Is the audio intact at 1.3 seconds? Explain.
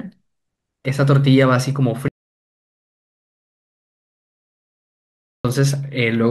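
Yes, at 1.3 seconds the speech is intact, with no dropout, click, distortion or other fault at that point.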